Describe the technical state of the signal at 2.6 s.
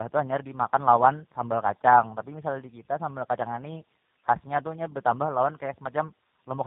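At 2.6 s the speech carries tandem speech coding, present across the whole clip: GSM full rate and then G.729A each coded it, the second working on the first's already damaged output. Unlike a single codec, the roughness and warble compound, with nothing above 3.8 kHz.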